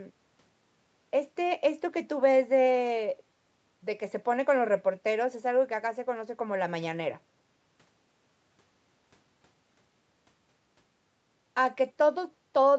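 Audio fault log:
No faults heard in this speech recording.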